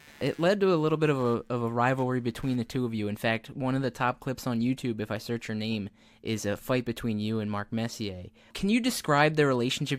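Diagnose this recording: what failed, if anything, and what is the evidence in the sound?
A buzzing, chirpy rasp sits under the speech from the very start to about 3.05 s, pulsing at around 150 Hz and roughly 30 dB below the speech, then stops while the talking carries on. This is computer activity noise in the analogue wiring: processor, graphics or mouse load changes disturb the ground shared with the audio circuit, so the interference follows the computer's workload rather than anything in the sound itself.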